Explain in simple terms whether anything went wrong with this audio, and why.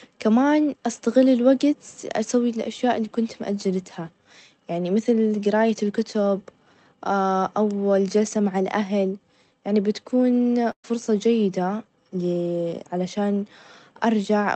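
At 10.71 to 10.85 s, right after "يعني بتكون", a burst of packet loss occurs. The last sound is stretched and fades out, then the speech jumps ahead with a short piece missing.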